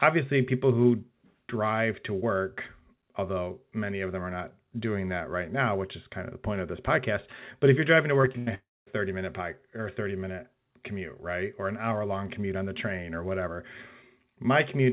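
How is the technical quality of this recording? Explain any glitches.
The recording is narrowband, with nothing above 4 kHz, which fits a G.711 mu-law call at 64 kbps. It has two connected glitches just past the eight-second mark.

From 8.22 to 8.49 s there is repeated packet loss, heard as robotic sound. Four short holes, the longest 82 ms, were each filled by stretching the preceding audio. Nearly half that span is synthetic, so it sounds choppy, with fragments missing.

From 8.55 to 8.88 s the last sound carries on briefly and fades, then falls into about 220 ms of silence before resuming with a section absent. The likely cause is a long network dropout, where the receiver extends the last sound until that gives way to silence.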